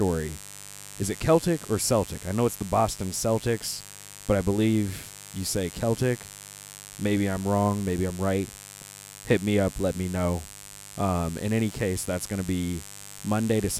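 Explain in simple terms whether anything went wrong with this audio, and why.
Electrical interference from the 50 Hz mains supply leaked into the recording, adding a steady, raspy mains buzz under the speech for the whole clip.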